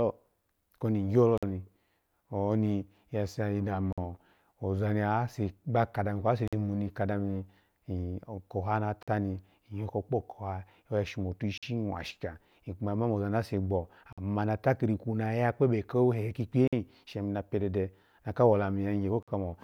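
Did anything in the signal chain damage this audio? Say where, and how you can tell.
Yes. A gap between chunks, at the codec or playback stage: 50 ms holes at 1.38, 3.93, 6.48, 9.03, 11.58, 14.13, 16.68 and 19.23 s. The audio was handled in 2.5 s chunks, with silence left at each join.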